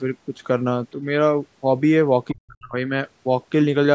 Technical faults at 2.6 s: speech suppressed in double talk

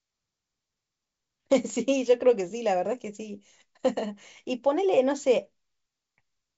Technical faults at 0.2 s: none

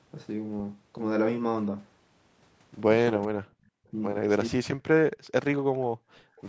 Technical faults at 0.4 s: none

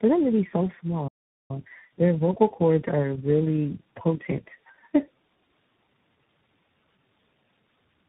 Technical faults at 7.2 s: tandem speech coding

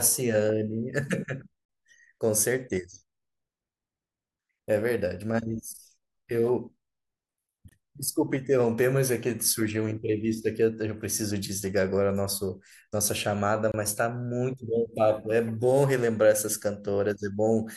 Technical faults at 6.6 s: none

